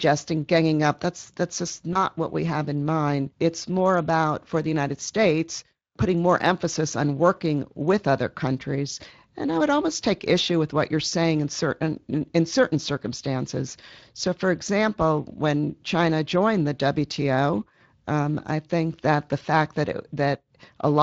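Throughout, the speech has a grainy, hoarse edge. This is the Speex codec. Its CELP coding leaves too few bits to model the excitation cleanly, and the plainly audible damage suggests a setting of around 20 kbps.

From 1.93 to 1.98 s the voice briefly smears into a short buzzy tone or coloured noise that fades. A weakened or distorted stretch follows before it steadies. This is VoIP packet loss concealed by the speech codec. The decoder extended its last pitch and filter with falling gain across the gap, which fits a single lost 20 ms frame, and needed a few more frames to rebuild its state.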